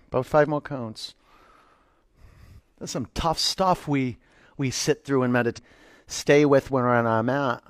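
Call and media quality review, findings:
Speech jumps ahead at 5.53–5.59 s with a small blip, some of the talk gone. Likely a stream segment skipped: one segment failed to load, player moved on to the next.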